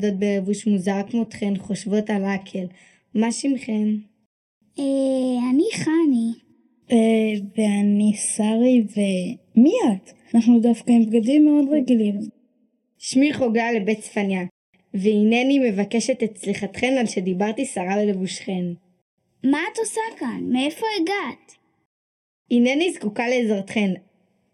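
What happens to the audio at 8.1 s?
At 8.1 s you're hearing the channel delay (comb filtering) that runs through the whole clip, not something that starts there. One channel lags the other by only a fraction of a millisecond, and when the two fold down to mono, everything they share cancels at evenly spaced frequencies. The first notch lands at around 1.5 kHz, with more stacked above it, so the audio comes across hollow and a bit phasey, with a dip in the upper mids.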